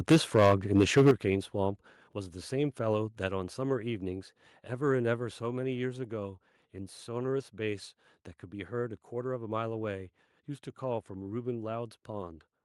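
Speech opens with microphone overload from 0.1 to 1.11 s. The input is driven about 10 dB past the converter's ceiling, so roughly a tenth of the samples are flattened, giving the loudest syllables a harsh, crackling edge. The likely cause is an input volume set too high. On a waveform the peaks show as flat-topped plateaus. A spectrogram shows broadband vertical smears of harmonic distortion reaching high into the kHz range on each loud syllable. Microphone volume stepped down four times, at 0.12 s (about 2 dB), 1.11 s (about 8 dB), 3.15 s (about 2 dB) and 5.19 s (about 3 dB). Each time, voice and background fall together in an instant. This is likely the call software reacting to the clipping by cutting the device's input gain. The waveform envelope shows these as abrupt staircase drops, the largest ending the flat-topped section. On a spectrogram the whole frequency range darkens uniformly at each step.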